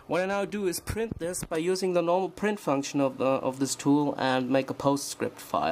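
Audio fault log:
No fault to log.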